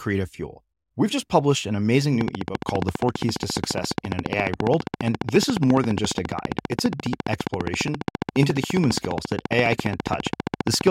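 A source of periodic pulses, likely interference from nearby equipment or a faulty connection or power supply, starts firing into the signal at 2.21 s, just after "just published an amazing", and keeps going until 10.88 s. The result is a train of clicks: evenly spaced ticks at about 14.7 per second, around 150 in all, each much the same shape and rising roughly 15 dB above the speech, so they poke through over the talking and in the pauses.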